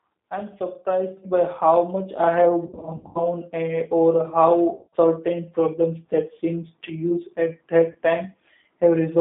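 Throughout, the speech carries G.729 codec damage: band-limited to roughly 150 Hz to 3.7 kHz, with the rough, synthetic texture of an 8 kbit/s coder that resynthesises speech from a filter, a pitch predictor and a few pulses per frame.

At 1.17 s the microphone volume is stepped up. Voice and background jump together by about 7 dB in a single step, as the call software raises the input gain.

VoIP packet loss, concealed by the speech codec, follows. From 2.67 to 3.21 s, about 260 ms of audio is missing across 480 ms, with the longest gap 80 ms. The decoder extrapolates a buzzy tone or coloured noise that fades, and the speech stays weak after each gap. Shorter dropouts recur at 4.75 to 4.96 s (180 ms) and 7.91 to 7.96 s (40 ms).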